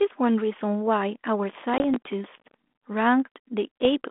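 From 1.50 to 2.54 s there's a run of processor overload crackle: the machine can't finish its tiny audio buffers on time, something like 3 ms each, and dozens of them get skipped in a row. Every miss drops a hard-edged sliver of silence, so the speech picks up a gritty, tearing crackle across that second that stops once the load eases off.

Buried in that stretch, at 1.78 to 1.82 s, you get packet loss on an ADPCM call, which comes back at 3.79 to 3.87 s. The line is a 32 kbit/s G.726 ADPCM link, band-limited to roughly 250 Hz to 3.5 kHz. Each time, about 20 ms of audio, a single packet's worth, goes missing and is filled with silence. The decoder's predictor and step size lose track of the sender's, so after the abrupt hole the speech comes back with a bit of distortion for a few tens of milliseconds before it settles.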